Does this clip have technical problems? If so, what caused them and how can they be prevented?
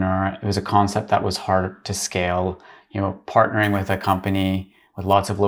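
Yes. From 3.63 to 5.13 s there is crude rate conversion: samples are repeated without filtering, which fits a 32 kHz to 44.1 kHz step, leaving an inharmonic fizz about 30 dB below the speech. Unlike steady hiss, it tracks loud and bright sounds. Prevent it by resampling with a proper band-limited (polyphase or sinc) converter.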